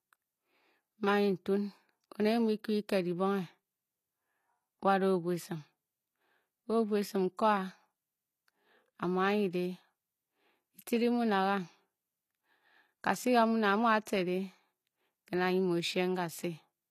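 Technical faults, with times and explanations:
Throughout, HE-AAC compression: s sounds and upper treble are plainly gritty and metallic, with high harmonics out of line with those below, likely from spectral band replication copying lower bands upward. Unlike a dull low-passed codec, brightness extends to 20.4 kHz, which fits about 24 kbps.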